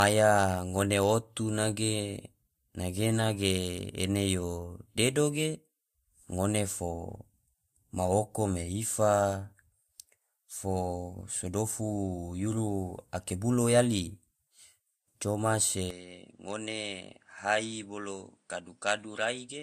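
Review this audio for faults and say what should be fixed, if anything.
The whole clip carries a layered compression smear, and nothing gets above about 15.3 kHz. That's transcoding between lossy codecs, likely an MP3 pass followed by Vorbis. The second encoder spends its bits on the first one's artefacts and stacks its own on top. Keep a lossless master and encode just once at the very end.

From 15.90 s to the end the speech suddenly goes duller and drops a few dB, with a faint new noise floor sitting well below it. There's no gap at the changeover, and the band now stops around 9.9 kHz. So the input likely switched to a poorer device partway through. Lock the recording input so the system can't hand off to another microphone mid-take.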